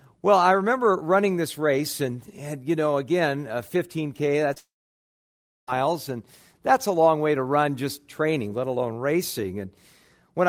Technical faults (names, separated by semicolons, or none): short concealed packet loss; long network dropout